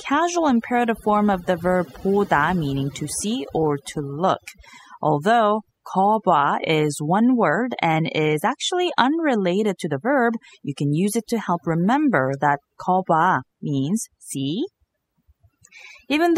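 From start to finish, the speech carries overdone noise removal. A noise reduction process was pushed far too hard on a noisy recording. Any frequency band sitting close to its noise estimate gets pulled right down or switched off. Quiet parts of the voice fall below that line and vanish with the noise. Between phrases the background drops to near silence, dotted with twinkling specks.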